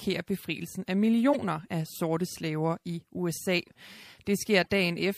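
MP3 compression runs through the whole speech clip. The speech sounds watery and swirly, which points to a low bitrate around 64 kbps. The likely cause is an encoder short of bits that dropped the high band and zeroed weak frequency lines. Those lines flicker on and off from frame to frame, so the s sounds chirp metallically and the onsets smear.

Corrupt frame decoded events occur at three points. From 1.32 to 1.49 s, after "befrielsen af" and before "af sorte slaver i", a loud error peaks near -15 dBFS over several frames. The decoder played damaged frames and their misread gains and codes put energy at wrong frequencies. A much fainter error follows at 3.66–3.71 s, near -50 dBFS. A moderate error comes at 4.63–4.70 s, around -35 dBFS.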